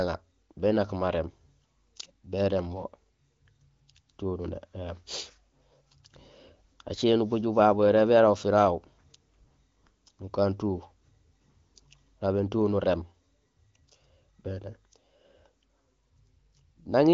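No technical faults can be heard in this speech recording. It passed through an AMR wideband (HD Voice) codec at what sounds like one of its higher rates, around 18 kbit/s, so the speech stays clear with at most faint coding traces and nothing above about 7.2 kHz.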